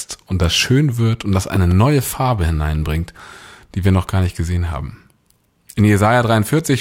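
A speech recording with a loud pop fault: two sharp pops in quick succession between 1.55 and 1.74 s, just after "schön wird und das", peaking roughly 10 dB above the speech, which continues underneath. The likely cause is a sudden voltage step or pulse entering the signal chain, such as a plug being moved, a switch, a static discharge or a driver glitch. The downstream circuitry shapes each pulse into a short thump.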